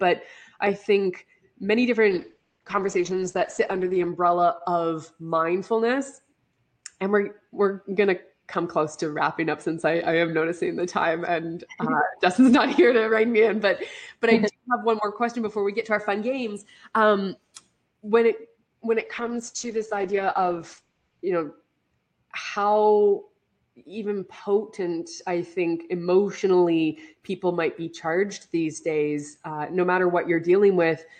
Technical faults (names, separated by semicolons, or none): call bitrate drop